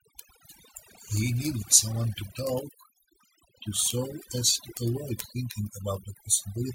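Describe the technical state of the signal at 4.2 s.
At 4.2 s the speech carries overdone noise removal, present across the whole clip. A noise reducer set too aggressively has pushed frequency bands near its noise estimate down to nothing, leaving near-silent background with twinkling specks. A spectrogram shows scattered isolated bins in gaps and holes eaten into the speech harmonics.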